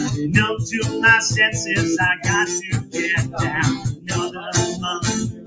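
From start to finish the level breathes and flutters: held parts and decaying tails keep sinking while sharper onsets punch through, leaving a thin, pumping texture with swings of around 10 dB. This comes from a noise suppressor applied to music or sounds, a speech-oriented suppressor that treats steady, non-vocal material as noise and keeps pulling it down. The call microphone processing, whose band stops at 8 kHz, adds its normal bass roll-off.

Three sharper dips stand out. From 2.82 to 2.97 s the sound suddenly caves in by about 12 dB, then recovers. From 3.76 to 4.10 s a longer stretch sags by the same depth. From 5.32 s to the end the tail sinks by about 12 dB again. Each is sound cut by the noise suppressor: it judged these sustained or fading moments to be noise and attenuated them harder than the surrounding audio.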